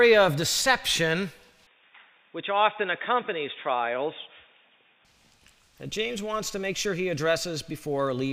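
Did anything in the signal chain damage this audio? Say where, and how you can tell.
Yes, at capture: from 1.67 to 5.05 s everything above 3.7 kHz vanishes and a faint new noise floor appears, likely an input switched to a poorer device.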